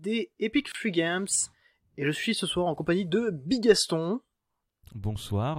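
At 0.72 s the speech cuts out for 27 ms and resumes at 0.75 s. This is a gap at a join of encoded pieces, where untrimmed encoder delay and end-frame padding sit between separately encoded segments. The edges are smeared by the codec, and nothing is skipped, unlike a dropout.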